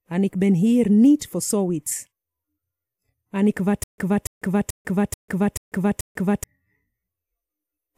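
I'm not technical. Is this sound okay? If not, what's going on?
No. From 3.84 to 6.44 s, one scrap of speech repeats six times with short silences between. This is a stutter with silent gaps, likely from playback stalling.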